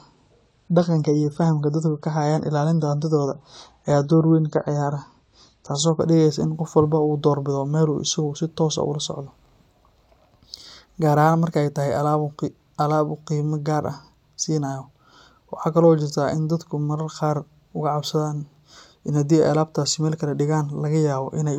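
Speech recording with an adaptive stream starting at a low bitrate: from 0 to 6.0 s, before "dhigaysa in qof walba", treble stops near 11.5 kHz and artefacts thicken, fitting 32 kbit/s AAC, then quality jumps seamlessly, consistent with 96 kbit/s.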